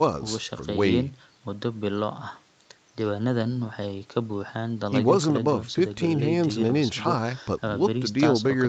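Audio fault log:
Nothing to flag here: the speech has just gone through a call's usual microphone processing, which trims the deepest bass and leaves nothing above 8 kHz, exactly as that path normally sounds.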